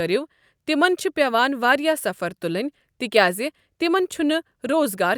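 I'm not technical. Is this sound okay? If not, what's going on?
Yes, nothing wrong can be heard anywhere in this recording.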